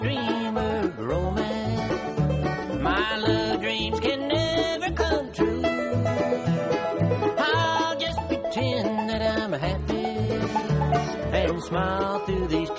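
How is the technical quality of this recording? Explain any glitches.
The recording has one fault running through the whole clip: the resampler restarted on every block. The audio was converted from 24 kHz to 16 kHz in separate 100 ms chunks. Each chunk was processed as if nothing came before or after it. So at every chunk edge the converter filled in wrong neighbouring samples. That leaves a small error at each boundary. You hear it as a steady tick at 10 Hz, present whenever there is sound.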